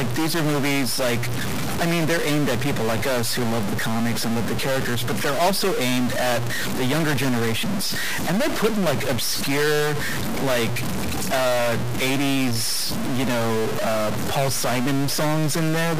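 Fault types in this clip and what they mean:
Stuck bit: One data bit likely holds a fixed value, adding harsh buzzy distortion throughout the speech and filling pauses with noise around -20 dBFS.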